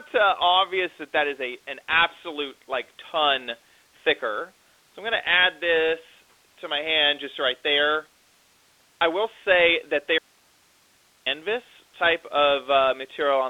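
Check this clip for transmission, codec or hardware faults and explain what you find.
One fault stands out, heard over speech that is band-limited to a telephone line, with nothing above about 3.8 kHz and the light texture of G.726 ADPCM at a rate that fits 32 kbit/s. From 10.19 s to 11.26 s, an audio dropout to a faint residue removes about 1.1 s of speech. The gap holds only hiss, roughly 40 dB below the speech. The likely cause is a break in the wanted signal while the path after it stayed live, so the line's own noise carried on. Unlike a pause or fade, the speech is cut abruptly at both edges, and the hiss continues rather than falling to digital silence.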